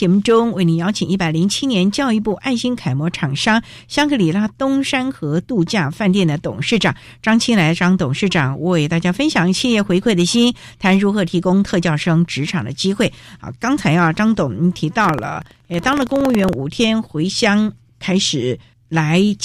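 From 15.0 to 16.53 s there's buffer tearing: the writer and the hardware reader have slipped, so a small sliver of each period, a couple of percent, replays audio from about a tenth of a second earlier. That gives a rattly 21.5 Hz buzz riding the speech, which fits a 2048-sample buffer.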